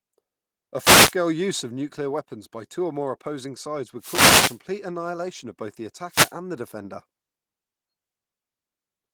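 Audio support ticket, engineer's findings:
Wireless microphone noise hits at 0.79–1.15 s, 3.98–4.60 s and 6.09–6.34 s: swishes of static over the speech. RF fades from multipath cancellation let receiver noise through. Check antenna placement and diversity.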